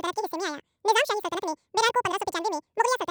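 Speech, and it's been hit by audio read two samples at a time (double speed) from start to finish. Whatever's decoding it is treating each pair of samples as a single frame, as if the stream were stereo or twice the sample width it really is. So everything plays back at twice the speed and a full octave, 12 semitones, too high, giving that chipmunk quality.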